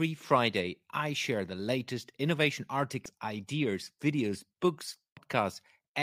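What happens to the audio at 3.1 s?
Damaged data in a compressed stream from 3.06 to 3.09 s: corrupted frames garble decoding into a brief glitch.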